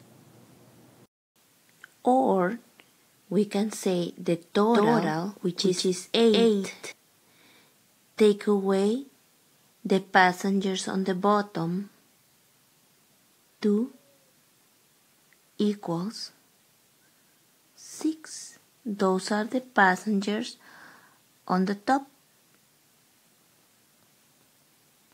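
From 4.74 to 6.92 s, a doubled audio track appears. A second copy of the sound plays about 200 ms behind the first. It is roughly as loud as the original. The copy is full-band and dry, with no decay or room colour. It begins and ends abruptly. This gives a hard, slapback echo on every event. The likely cause is a second capture through a slower path being mixed in with the main one.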